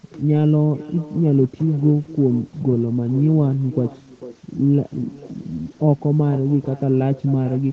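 From start to finish, every phrase is trailed around four tenths of a second later by a faint, thin copy about 18 dB down: echo with no canceller on the far end's loudspeaker.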